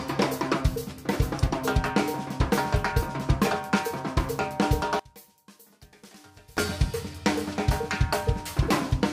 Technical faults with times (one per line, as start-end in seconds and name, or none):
4.99-6.57 one channel inverted